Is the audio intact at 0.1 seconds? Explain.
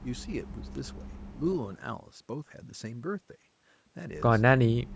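No. From 0.0 to 0.26 s a faint, delayed copy of the speech trails the main sound, lagging by about 250 ms and sitting roughly 35 dB below it. This is an echo leak, likely from a far end playing the call over a loudspeaker whose echo canceller let part of the microphone pickup slip through and return.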